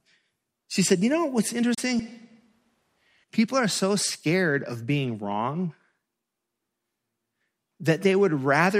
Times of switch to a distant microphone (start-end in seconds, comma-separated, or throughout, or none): 1.99-3.24